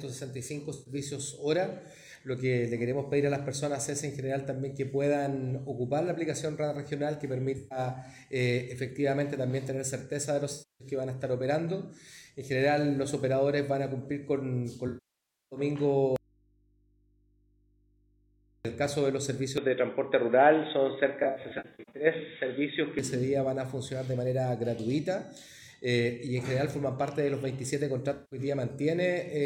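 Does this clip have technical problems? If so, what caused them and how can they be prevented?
Yes. AAC frame loss with concealment occurs at 0.73–0.93, 7.58–7.78, 10.52–10.88, 14.87–15.59, 21.19–22.06 (scattered short gaps) and 28.14–28.39 s. The decoder fills each gap from the last good spectrum, which gives smeared, phasey patches rather than clean silence. Protecting the stream with error correction or retransmission prevents this.

Audio dropout to a faint residue from 16.16 to 18.65 s: the sound cuts abruptly to mains hum about 35 dB down, likely from a broken connection with the input left live. This is a gap holding only hum, not concealment smearing. Secure cabling and connectors prevent it.

Input switched to a poorer device from 19.58 to 22.99 s, likely a fallback microphone: the sound turns dull, with nothing above 3.8 kHz, a level about 5 dB different and added background noise, and there is no gap at the switch. 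The duller tone lasts for the whole span, unlike a short dropout. Locking the recording input prevents it.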